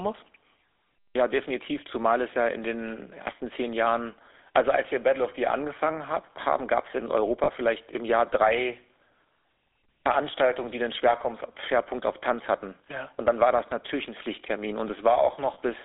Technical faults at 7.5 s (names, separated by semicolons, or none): GSM full-rate codec; lost GSM frames